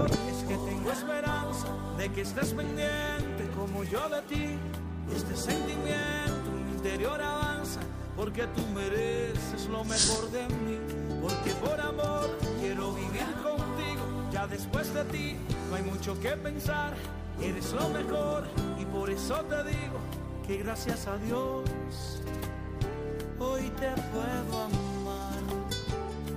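Throughout the clip, the converter's sample clock is wandering, a case of sample clock jitter on the order of a couple of microseconds, so each sample lands slightly early or late at random. Because the timing error turns into amplitude error wherever the waveform is changing fast, it adds a grainy hiss sitting somewhere around 35 dB below the signal. That roughness swells on loud, bright passages and falls away completely when the sound goes quiet.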